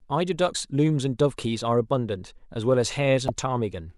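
Damaged data in the compressed stream hits twice, at 0.51 s and 3.26 s: corrupted frames throw the decoder off sync, leaving a brief 50 ms glitch each time.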